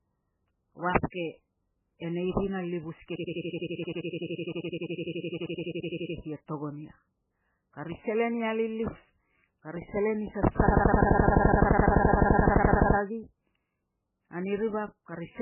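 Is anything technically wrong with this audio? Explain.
Yes, there are two faults.

Throughout the speech there is heavy damage whose likely cause is MP3 compression at a very low bitrate, one that fits about 8 kbps. Starved of bits, the encoder drops weak frequency lines and cuts everything above 3 kHz. The result sounds dull, watery and swirly, with smeared consonant attacks. On a spectrogram, energy stops at a hard ceiling near 3 kHz, and isolated patches blink on and off from frame to frame.

From 10.67 to 12.97 s there is a system hang loop. The computer stalled while the sound hardware kept replaying its ring buffer, so one 85.33 ms fragment, which fits a 4096-sample buffer, repeats 27 times at 11.7 Hz. It is heard as a rapid machine-gun stutter. The waveform shows an identical short block tiled end to end, and the spectrogram shows the same slice copied in regular vertical stripes.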